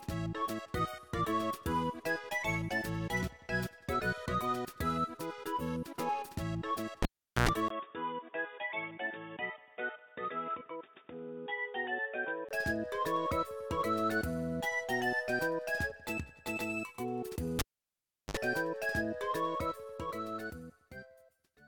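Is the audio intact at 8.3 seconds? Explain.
No. From 7.68 to 12.51 s the input is switched to a poorer device, most likely the system moving to another microphone or a headset's call profile partway through. After a brief 20 ms gap, the sound turns dull and boxy, with nothing above 3.6 kHz, drops to roughly 5 dB quieter, and picks up a new background noise sitting around 40 dB below the signal. At 8.3 s that narrowed, quieter input is still in place.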